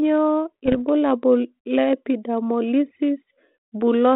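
From 0.66 to 0.76 s the speech breaks into pops and a short rough burst with brief jumps in level. These are bit errors on an ADPCM link. At a low error rate, flipped bits throw off the decoder's step size and predictor, so each hit keeps ringing for several milliseconds. Unlike packet loss there is no gap or smoothed-over fill. The signal stays present but garbled, over a 32 kbit/s G.726 line band of 200 Hz to 3.6 kHz.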